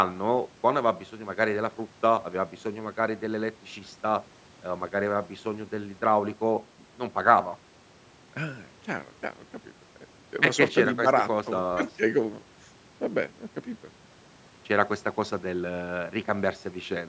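Nothing stood out on listening to this speech, which carries the expected trimming of the lowest bass from the call's microphone processing and nothing above 8 kHz.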